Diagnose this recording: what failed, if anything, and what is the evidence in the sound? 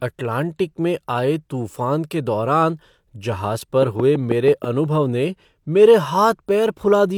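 A train of clicks runs from 3.83 to 4.65 s: about seven similar pulses at a regular 6.1 per second, standing around 10 dB above the speech. The stage is likely analogue wiring or power, with interference, a faulty connection or a power-supply fault injecting repeated pulses.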